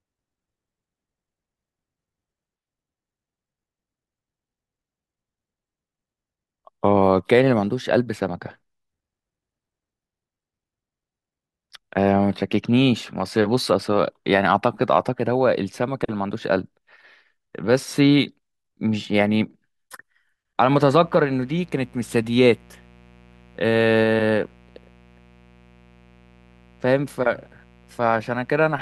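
From 20.69 s until the end at 28.81 s, a steady, raspy mains buzz sits under the speech, roughly 30 dB below it: quiet, but edgy and constant. It is built on a 60 Hz mains supply. Something like a dimmer, a rectifier or an unshielded cable has let sharp switching spikes into the signal twice per mains cycle, and those spikes spread harmonics of 60 Hz up into the kilohertz range, which gives the buzz its gritty edge rather than a smooth hum.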